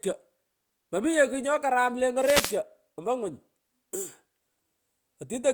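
Speech with a wireless microphone noise hit from 2.18 to 2.60 s: the FM link fades, receiver static swells, showing as a broadband smear on the spectrogram and fuzzy waveform.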